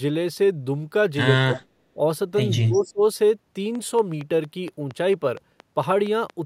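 A speech recording with three kinds of fault. An echo canceller likely caught in double talk, unable to separate the near talker from the loudspeaker echo, turned everything down, giving speech suppressed in double talk: the voice sinks by roughly 25 dB from 1.44 to 1.58 s and again, for about 0.4 s, from 2.65 to 3.03 s. Inside that second dip, a likely incomplete echo cancellation on a speakerphone lets an echo leak back: from 2.72 to 2.87 s a faint copy of the voice, around 20 dB below it, trails the original by 210 ms. Then interference from nearby equipment or a faulty connection likely injects a train of clicks: from 3.75 to 6.31 s about ten similar pops tick at a steady 4.32 per second, roughly as loud as the speech and audible in the gaps too.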